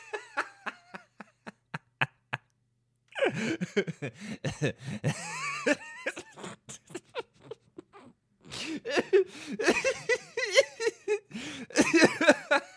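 No faults detected; nothing to report across the clip.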